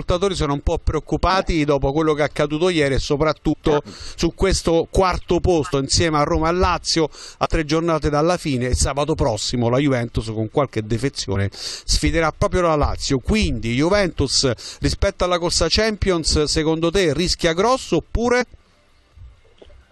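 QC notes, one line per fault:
1.29–1.31 s, 3.52–3.54 s, 5.70–5.74 s, 7.44–7.47 s, 12.41 s, 18.40–18.42 s: compressed frames skipped. At each point the decoder never plays some whole frames, either because they are absent or because it rejected them as corrupt. Playback jumps forward by roughly 20 ms at the first, third and last, about a twentieth of a second at 7.44 s, about 70 ms at 12.41 s, and a tenth of a second at 3.52 s.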